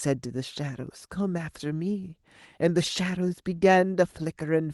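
Clock drift between sender and receiver runs through the whole speech clip. The sender's clock is slower than the receiver's by roughly one and a half percent, so the receiver's jitter buffer keeps draining and must be topped up. The timing simply sags a little, and because it comes from a steady rate mismatch it persists everywhere, not in isolated bursts.

Repeated timing corrections follow from that drift, from 0.28 s to 4.63 s. Short pieces are repeated or stretched, all in the same direction, adding about a tenth of a second in total and leaving the delivery near 98 percent of its proper pace. They fall at uneven intervals and, if heard at all, come across as faint hiccups and a slightly halting tempo. This sets them apart from wow or flutter, which bend pitch smoothly and periodically. The pitch here stays put, and the Opus call path limits the band to 12 kHz.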